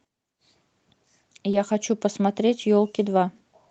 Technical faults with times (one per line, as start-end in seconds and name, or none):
1.51-1.55 short concealed packet loss
2.61-2.65 short concealed packet loss